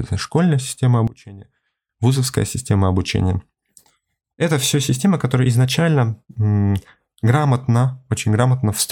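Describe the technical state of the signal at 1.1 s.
At 1.1 s the signal sits inside a sudden dip from 1.08 to 1.89 s, between "школьная система" and "вузовская система обучения". The level falls by about 21 dB and the speech turns faint, which points to one channel inverted: with one side's polarity flipped, the centred speech cancels in the mono sum. The waveform shows a sharply narrowed envelope for that span, and the spectrogram shows the band fading.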